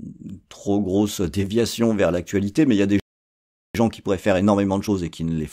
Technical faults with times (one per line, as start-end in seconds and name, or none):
3.00-3.75 playback stall
3.75-5.52 time-compressed catch-up